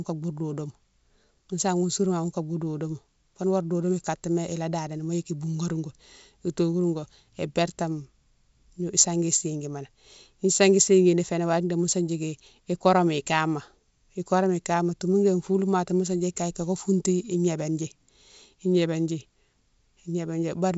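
The clip is speech carried over G.722 wideband telephone coding at 64 kbit/s, and nothing is technically wrong with it.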